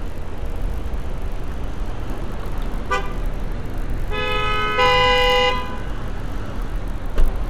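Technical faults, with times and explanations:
Throughout: resampler restarted on every block. Each 20 ms block was converted from 24 kHz to 48 kHz on its own, leaving a small error at every edge. The result is a 50 Hz buzz present only with signal, seen as evenly spaced vertical lines on a spectrogram and tiny waveform steps.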